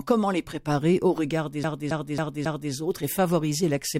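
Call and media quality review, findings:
CD stuck on one turn, 1.64 to 2.73 s. Disc read path jumps back one track at the same point on each turn, likely a scratch. The same 0.27 s of speech repeats four times, with a brief mute at each jump. Result: a fast, evenly spaced stutter, the classic skipping-CD sound, before playback moves on.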